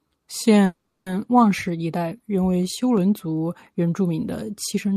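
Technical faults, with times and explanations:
0.65 to 1.08 s, call audio freeze: The sound stalls and the last moment is stretched into a brief fading buzz, which sinks into about 320 ms of near silence before the speech resumes. This is likely a call audio freeze: packets were held up, the jitter buffer ran empty, and the receiver padded about 410 ms with an extended tail and quiet. When the packets arrived, playback continued where it had stopped, so nothing is lost, but everything after runs about 410 ms late.
2.97 s, dropped samples: A single sharp click, too brief to take away any audible sound, shows as a thin vertical line across the spectrum. The likely cause is dropped samples. A fraction of a millisecond of the stream went missing, so the waveform jumped straight from one value to a later one. That step discontinuity spreads energy across all frequencies at once, which is why it is heard as a click and not as a gap.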